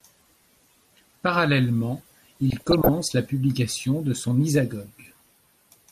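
Speech runs dull and gurgly throughout, with a granular edge from coarsely quantised, flickering upper bands, likely MP2 compression at a low rate near 80 kbps. From 2.50 to 2.89 s, just before "la publication de son", DAB burbling occurs: bit errors of under one percent slipped past error correction and put short blips of noise into individual sub-bands.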